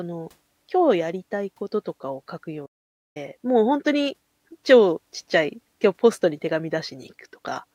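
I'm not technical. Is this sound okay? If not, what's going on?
No, not quite. At about 2.65 seconds the speech just stops dead for roughly half a second, picking back up at 3.17 seconds. That's a playback stall: the player most likely ran short of audio data and went silent until it caught up.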